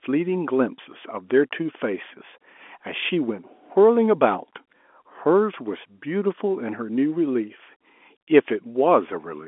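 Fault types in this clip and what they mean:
No faults can be heard in this speech clip.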